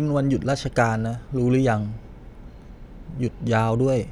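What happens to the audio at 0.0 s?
Nothing goes wrong at 0.0 s; the audio is intact, with no audible fault at that moment.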